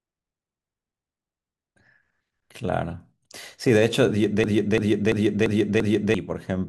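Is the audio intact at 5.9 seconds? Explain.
No. At 5.9 seconds the speech is stuck in a system hang loop, from 4.44 to 6.14 s. A frozen driver left the hardware replaying one 341 ms ring buffer, which fits a 16384-sample buffer, five times at 2.93 Hz. The result is a stutter, and about a second and a half of speech is lost.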